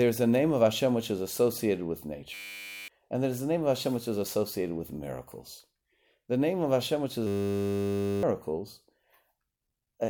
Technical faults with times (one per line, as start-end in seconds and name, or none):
2.34-2.88 system hang loop
7.27-8.23 system hang loop